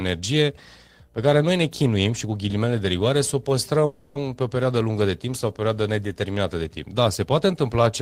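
At 3.85 s, right after "de rigoare să o", the speech stops and the last sound is drawn out as a fading buzz for about 0.36 s before the talk resumes with "pe o perioadă lungă". This is a call audio freeze, most likely caused by packets stalling in transit so the jitter buffer ran dry. The receiver filled roughly 300 ms with a continuation of the last sound, then picked up where it left off. Nothing was lost, but everything after it now runs about 300 ms late.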